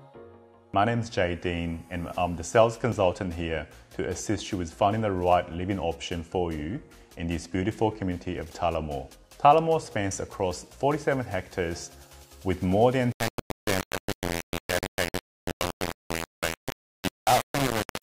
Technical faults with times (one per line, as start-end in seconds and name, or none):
13.12-18.03 low bit depth without dither